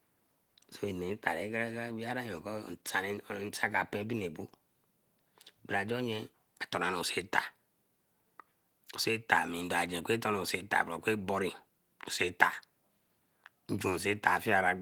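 No technical faults can be heard in this recording.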